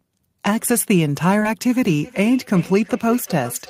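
At 1.39 to 1.43 s and again at 1.43 to 1.47 s, short concealed packet loss causes a brief smear. The decoder stretched the previous sound over each missing slice.

From 2.03 s to the end, a feedback echo between two devices appears. A second device replays the speech back into the microphone, repeating roughly every 0.4 s and peaking at about 17 dB below the speech.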